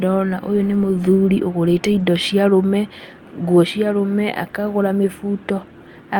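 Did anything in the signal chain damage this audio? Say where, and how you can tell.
No, nothing along the chain seems to have left a mark on this speech recording, so there's no damaged stage to point to.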